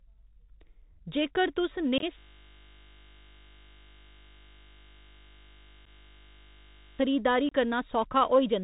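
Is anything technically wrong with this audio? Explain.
Yes. Bluetooth CVSD headset codec throughout: one-bit adaptive-step coding caps the audio at 4 kHz, leaving the speech muffled, with scratchy sibilants, distorted loud peaks and a grainy hiss.

Unconcealed Bluetooth headset packet loss at 1.98 to 2.04 s, 5.85 to 5.88 s and 7.49 to 7.52 s: dropped headset packets leave abrupt gaps. The first is 37.5 ms of holes scattered over 45 ms, sounding choppy.

A system hang loop runs from 2.19 to 6.99 s: a frozen driver kept replaying one 20 ms buffer, producing a steady 50 Hz buzz instead of speech.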